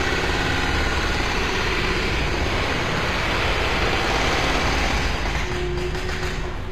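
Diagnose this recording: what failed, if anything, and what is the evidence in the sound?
The fault sits at the codec stage, likely HE-AAC compression. Throughout, the treble is gritty and metallic, with nothing above 15.4 kHz. Unlike a plain low-pass loss, the top is present but rebuilt by band replication, which fits a bitrate near 24 kbps.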